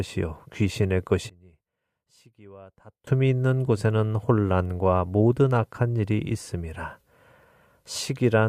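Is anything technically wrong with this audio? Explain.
Yes. From 1.30 to 3.07 s the speech nearly vanishes, dropping about 26 dB. The likely cause is one channel inverted, cancelling the shared centre in mono.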